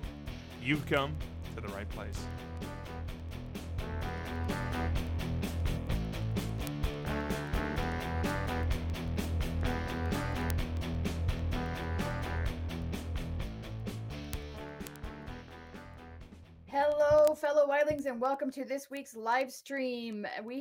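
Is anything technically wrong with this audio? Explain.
Yes. From 0.17 s to 20.57 s there are word clock ticks, around two hundred sharp clicks at roughly a tenth of a second apart. The receiving device runs on its own clock, a few hundred ppm off the sender's, so one sample is dropped or repeated each time they slip. A spectrogram shows evenly spaced thin vertical lines, and a zoomed waveform shows single-sample discontinuities.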